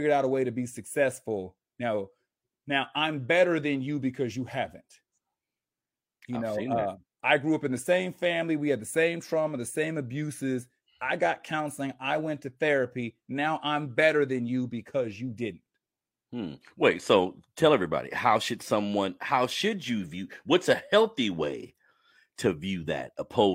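Nothing goes wrong anywhere in this stretch of speech, so there's no technical fault to point to at any moment along the way.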